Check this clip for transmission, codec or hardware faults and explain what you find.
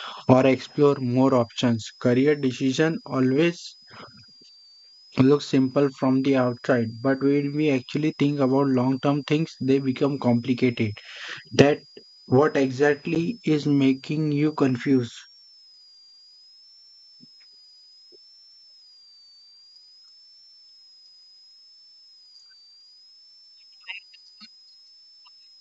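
Two faults stand out, carried over what sounds like clean full-rate G.722 wideband coding.

Switching supply whistle, throughout: a power supply running in audible burst mode or beating with another one leaves a faint whistle wandering between 4.5 and 5.6 kHz, roughly 5 kHz, about 30 dB below the speech.

Packet loss on an ADPCM call, 13.15–13.17 s: about 10 ms drops to hard-edged silence, which fits a single lost packet. The decoder's predictor then resyncs, leaving the speech briefly slightly distorted as "is making you" begins.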